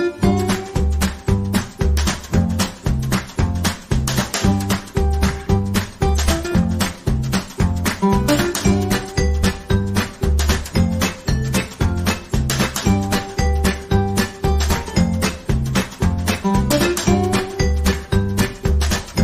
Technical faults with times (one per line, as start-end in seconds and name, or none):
none